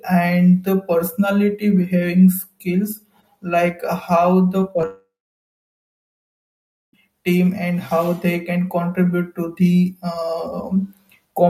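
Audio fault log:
4.60–4.84 s, repeated packet loss (robotic sound): four short holes in quick succession, the longest about 14 ms, each patched by stretching out the sound just before it. Roughly a sixth of this stretch is filler, so it comes out choppy.
4.86–6.98 s, long network dropout: the audio smears into a brief buzzy continuation of the last sound, then goes silent for about 1.8 s, about 2 s lost in all. It picks back up at "team and how they". A likely cause is a stall in the network feed.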